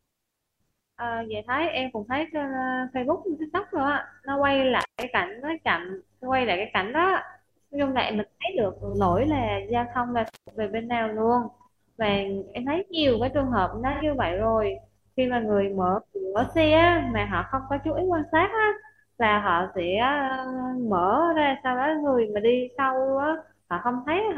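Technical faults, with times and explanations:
4.81–5.03 s and 10.26–10.51 s, intermittent contact: a loose connection opens for about 138 ms, then 173 ms, cutting the sound to faint hiss with crackle at each edge.
8.89–8.95 s and 13.92–14.03 s, AAC frame loss with concealment: the decoder rebuilds missing data from the last good spectrum for 43 ms, then 85 ms (which fits one and two lost frames), leaving brief smeared, phasey patches.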